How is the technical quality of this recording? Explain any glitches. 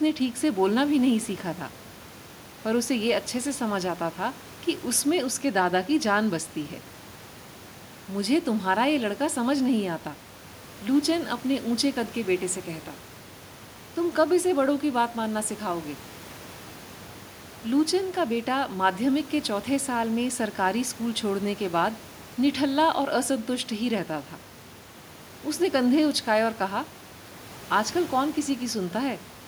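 The technical quality of this recording holds up, with no glitches to explain, only a faint room noise sitting about 23 dB below the speech.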